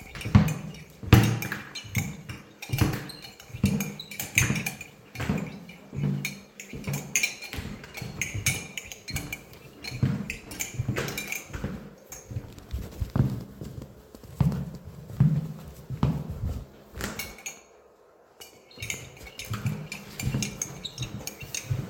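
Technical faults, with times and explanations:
No technical faults can be heard in this sound.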